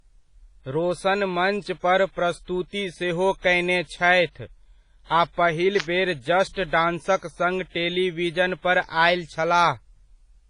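Throughout the speech there is heavy damage consistent with WMA compression, likely at a low bitrate around 24 kbps. Nothing remains above 10.5 kHz, and the sound rings and washes, with a hiss that rises and falls with the voice. Long transform blocks smear quantisation noise over tens of milliseconds and drop weak spectral detail. Unlike a simple low-pass filter, the damage moves with the signal instead of just dulling it.

Pre-echo appears three times. From 3.40 to 3.44 s, after "पर प्रस्तुति सेहो" and before "कयने छथि", a 45 ms hiss runs ahead of an attack. At 6.53 to 6.56 s, just after "पहिल बेर", it lasts 36 ms, and from 6.67 to 6.73 s it lasts 59 ms. In each case the onset fell late in a codec block, so the noise meant for the loud part also fills the quiet gap before it and softens the attack. What separates it from a click is that it comes before the sound and is a smear of noise, not a sharp transient.

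At 5.80 s an electrical switching spike, likely from a nearby switch or static arc, adds a sharp snap lasting about 5 ms on top of the audio. It stands apart from pre-echo because it is a brief, hard-edged click unrelated to any onset in the speech, not a hiss that leads into one.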